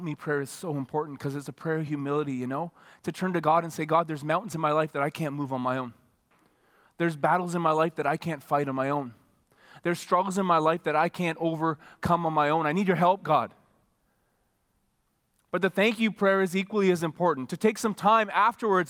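No technical faults are audible.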